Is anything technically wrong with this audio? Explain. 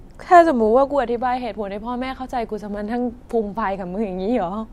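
No, nothing technically wrong can be heard anywhere in this speech recording.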